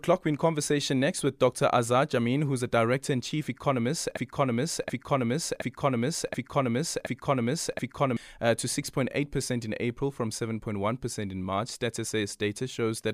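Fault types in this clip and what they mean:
Broken-record loop: from 4.17 to 8.17 s, one 0.72 s fragment repeats six times back to back, identical on every pass, likely because the player or stream stalled and kept resending the last piece it held. The speech due in that span is lost.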